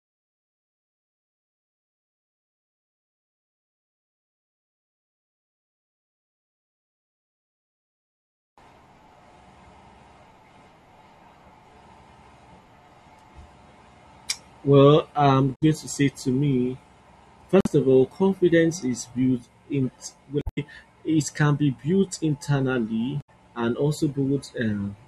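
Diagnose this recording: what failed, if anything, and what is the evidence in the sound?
The codec stage failed: there is damaged data in the compressed stream. Four short glitches break into the speech, at 15.52 to 15.63 s before "going to say to", 17.61 to 17.67 s before "of all confidence is", 20.39 to 20.58 s, and 23.21 to 23.29 s after "can be built internally". At each point the decoder hits corrupted frames, misreads them, loses sync and hunts for the next valid frame header.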